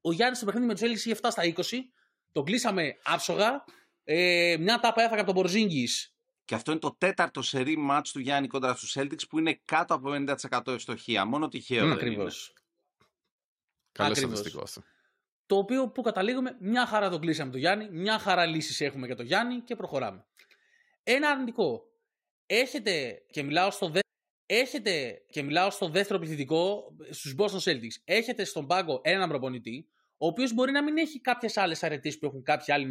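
At 24.00 s, right after "και μιλάω στο", the speech runs into a stream segment repeated fault. The player fetched or queued the same stretch of the stream twice, so the audio from 24.00 to 26.00 s plays again and the programme runs about 2.0 s longer. A blip marks the point where playback jumps back to the start of the duplicated stretch, and the same passage is then heard a second time before the speech continues.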